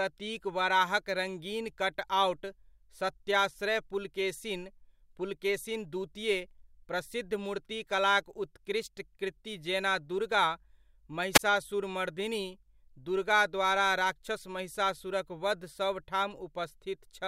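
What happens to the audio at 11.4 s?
Around 11.34 to 11.39 s the speech is interrupted by a wireless microphone squelch dropout. The RF signal from the analogue FM transmitter fades briefly, so hiss and static rise as the receiver loses signal. The squelch then closes and mutes the output for about 17 ms, leaving a short hole of near silence before the signal recovers and the speech returns. The whole event lasts roughly 55 ms.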